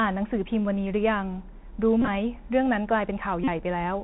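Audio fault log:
Throughout: Bluetooth CVSD headset codec. The speech is confined below 4 kHz, with a granular hiss underneath. Sibilants turn scratchy, and loud high-frequency sounds distort where the adaptive one-bit step cannot keep pace, which fits 64 kbps CVSD.
2.01–2.08 s and 3.44–3.48 s: Bluetooth headset packet repeated. Lost voice packets were filled by replaying the previous packet, giving a buzz near 267 Hz from the 3.75 ms repeat cycle. In the first event about 41 ms is lost, scattered over 60 ms, with runs up to roughly 20 ms. In the second event about 38 ms is lost.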